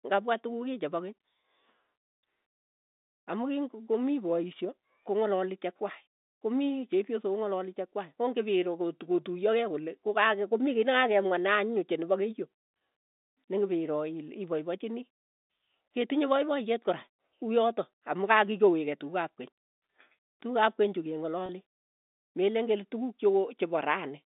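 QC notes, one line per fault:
21.46–21.49 s, packet loss with pitch repetition: 30 ms lost after "keny chu", fitting three dropped packets; the receiver repeated the last pitch period, causing a short buzzy hold.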